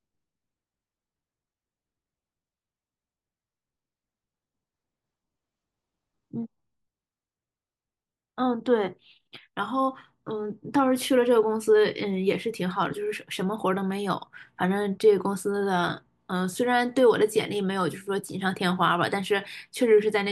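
No technical faults can be heard.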